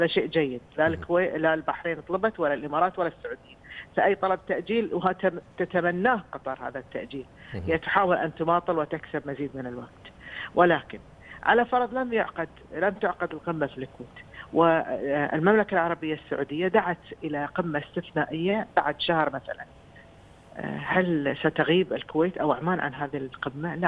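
No faults detected anywhere in the clip.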